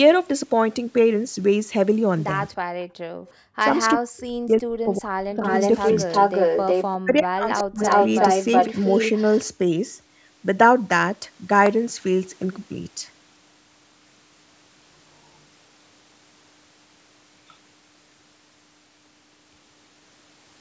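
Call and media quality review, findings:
Call and media quality review, findings:

Background gated by the echo canceller, 2.66–3.41 s. Canceller clamps the mic while far-end audio plays on the loudspeaker. Room sound drops about 40 dB, gone for roughly 0.7 s, then returns when suppression releases. Audible as a hole in the ambience.

Speech suppressed in double talk, 3.95–5.44 s and 7.0–7.81 s. Likely canceller failing to separate near-end talker from loudspeaker echo while both sides speak, so it attenuates everything. Near-end speech dips by roughly 40 dB, about 1.5 s and 0.7 s affected.

Echo leak, 5.45–6.87 s, 7.57–7.63 s, 7.84–9.4 s. Likely residual loudspeaker pickup passing the canceller and returning. Delayed copy trails the speech by 367–369 ms, at roughly speech level in the first and last stretches and about 15 dB down in the brief middle scrap. Heard as a doubled voice. Call mic high-pass present; band stops at 8 kHz.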